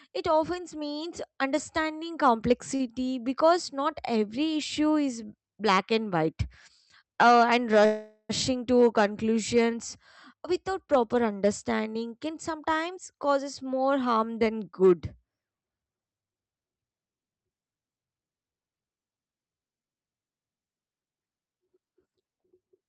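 Speech over a WebRTC call path shows three timing faults. At 2.75 to 2.81 s a late packet left the jitter buffer empty for a moment, so the receiver stretched the last sound by about 41 ms and then carried on from the same place. This short stall from a late packet holds one sound slightly too long, with a faint buzz or dip and nothing lost. From 7.85 to 8.31 s packets were likely held up in the network and the buffer ran dry again. This call audio freeze fills about 439 ms with a continuation of the last sound that fades into roughly 30 ms of silence before the speech resumes where it stopped, leaving a gap with nothing missing. From 21.02 to 22.82 s the jitter buffer, now holding more audio than it wants, performed a speed-up. It cut many short pitch-period pieces, about 0.3 s in total, so the speech plays at 114% speed at unchanged pitch and sounds rushed.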